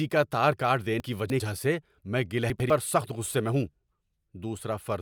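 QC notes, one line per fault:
1.0–1.4 s and 2.5–2.7 s: chunks out of order. After "کا تار کاٹ", a 100 ms slice plays three slices late. After "سے میں", one slice plays one slot late. Nothing is lost, but the sound jumbles briefly. There are three hard joins each time.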